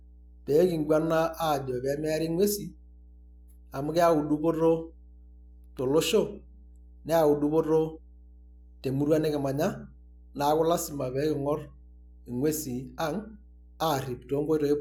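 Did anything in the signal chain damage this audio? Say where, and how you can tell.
Yes. A steady low drone sits under the speech from start to finish, pitched at 60 Hz with some low harmonics above it, and it stays at a constant level whether anyone is talking or not, roughly 25 dB below the speech. That is mains hum, and it entered in the analogue wiring: a ground loop or a transformer near the cabling let the 60 Hz power line couple into the signal before it was ever digitised.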